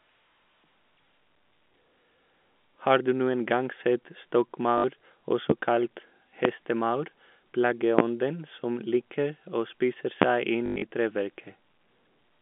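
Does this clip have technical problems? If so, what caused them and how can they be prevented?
Yes. There is packet loss with the last packet repeated, at 4.78 to 4.84 s (60 ms) and 10.66 to 10.82 s, where 140 ms is lost within 160 ms and the longest gap is 100 ms. The receiver replays old audio. The losses fit 20 ms packets. A steadier network and jitter buffer, or proper loss concealment, would prevent it.

Four loud pops occur, at 5.50, 6.45, 7.99 and 10.22 s, the last just after "å spise". Each lasts about 30 ms and peaks about 25 dB above the speech. Their likely cause is a voltage glitch from a connector, switch or driver. Secure cabling and stable drivers would prevent them.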